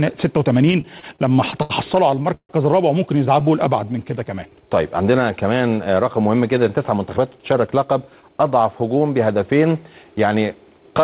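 From 0.72 to 1.72 s the audio hits repeated stalls, a stutter. Packets arrived late, so the jitter buffer kept running dry. Nine times the receiver stretched the last sound to bridge the wait. The longest gap is 73 ms, and about a fifth of the stretch is filled this way. Nothing is lost, but the flow catches and drags.

A second burst of stalls runs from 2.12 to 2.51 s. It has four gaps and one long hold of 147 ms. Concealment covers 44 percent of this short span, so the held sound fades before the audio resumes.

From 3.32 to 4.69 s comes a jitter buffer slow-down. The buffer was low, or had just raised its target delay. To rebuild a reserve the receiver repeated tiny pitch-length pieces, adding 128 ms in total. Playback runs at 91 percent speed while the pitch stays the same. The sound is drawn out.

From 6.58 to 8.52 s the opposite happens: a jitter buffer speed-up. The buffer held too much audio, so the receiver cut out short pitch-period slices, about 150 ms in all. 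The audio plays at 108 percent and sounds hurried. Throughout, the call path keeps nothing above 4 kHz, which fits G.711 A-law at 64 kbps.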